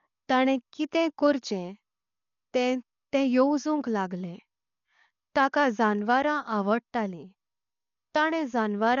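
Throughout the speech the sound is dull and heavily degraded, with nothing above about 7 kHz and a rough, fluttering noise around tonal parts. This is likely Dolby Digital compression at a low rate, around 48 kbps, narrowing the band and replacing unbitted frequency lines with dither noise.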